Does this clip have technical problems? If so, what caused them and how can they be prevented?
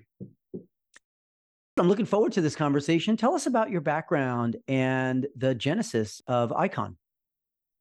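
Yes. There is a clipped start after a pause at 1.59 to 1.78 s, just before "I'm looking forward to". After a 0.62 s silence, the output device has gone to sleep and needs time to wake again, so about 0.18 s of the phrase's opening is swallowed and it bursts in abruptly. Muted pauses only drop the background during silence, while this loses the start of the speech itself. Keeping the output stream active through silences, or disabling the device's idle power-saving, prevents it.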